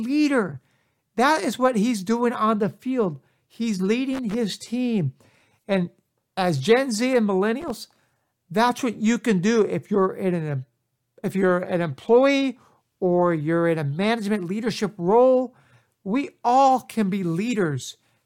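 At 4.13 s the speech breaks into a short, ragged burst of crackle lasting to about 4.34 s, and a second, briefer one hits at 7.61 s through 7.70 s. That's loose connector crackle: a worn or dirty contact somewhere in the cable path flickering on and off, chopping the signal into scratchy fragments. Both bursts are irregular and over in a fraction of a second.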